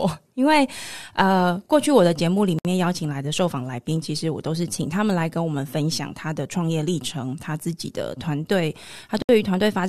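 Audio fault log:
2.59 to 2.65 s and 9.22 to 9.29 s, gap at a join of encoded pieces: separately encoded segments were joined without trimming encoder delay and end-of-segment padding, so the speech cuts out for about 62 ms and 68 ms, with smeared edges, then resumes exactly where it stopped.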